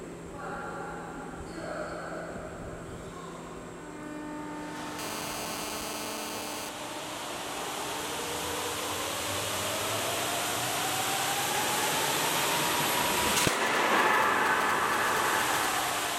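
From 4.99 to 6.69 s, a GSM phone buzz cuts in. A nearby phone on a call pulses at 217 Hz, rectified into a harsh, steady rasp about 8 dB below the sound.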